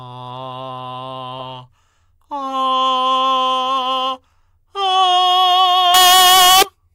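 From 5.94 to 6.63 s the music turns abruptly into a very loud, harsh, nearly square-edged blare, with quiet background detail raised to the level of the main sound, though pitch stays traceable. This is likely float read as integer: 32-bit float samples interpreted as 32-bit integers.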